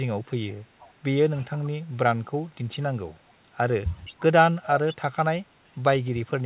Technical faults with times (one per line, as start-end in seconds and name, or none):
0.27-1.04 speech suppressed in double talk
0.48-0.91 echo leak
1.65-2.64 speech suppressed in double talk
2.82-3.30 echo leak
4.05-4.15 echo leak
4.09-4.33 speech suppressed in double talk
4.81-4.96 echo leak
5.25-6.31 speech suppressed in double talk